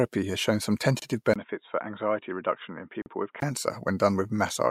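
Speech that twice drops out for a moment: right after "has shown some" at 0.99 s a 26.5 ms silence cuts in with smeared edges, and a 40 ms one follows at 3.02 s, each resuming exactly where it stopped. These are gaps at joins of encoded pieces, two seconds apart, where separately encoded pieces were joined untrimmed and each piece's start-up delay and end padding stayed in. Between 1.34 s and 3.42 s the sound turns dull and boxy, with nothing above 3.8 kHz, a faint new noise floor far below the speech, and a somewhat lower level, opening with a 20 ms silence at the switch. This points to the input switching to a poorer device, likely another microphone or a headset call profile.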